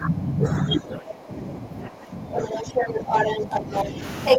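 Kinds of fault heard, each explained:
speech suppressed in double talk: the talker's speech dips by about 15 dB through nearly the whole clip, likely from an echo canceller ducking during simultaneous talk.
other side's voice leaking through: a second voice is heard from 2.35 to 3.85 s and again near 4.3 s, louder than the talker, likely left behind by incomplete echo removal.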